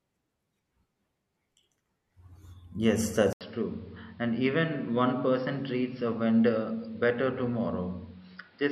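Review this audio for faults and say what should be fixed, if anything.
At 3.33 s the speech drops out for 80 ms, then comes back duller and about 5 dB quieter through to the end, with nothing above 5.5 kHz and new background noise roughly 35 dB down. That's likely the input switched to a poorer device, such as a headset's call profile. Lock the input device before recording and turn off automatic switching.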